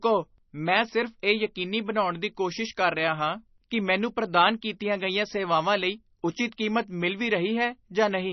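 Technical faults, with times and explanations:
Throughout, MP3 compression: a starved encoder likely discarded everything above 5.9 kHz and zeroed weak frequency lines that flicker on and off between frames, so the speech sounds dull, watery and swirly, with metallic chirps on s sounds; such heavy damage fits roughly 24 kbps.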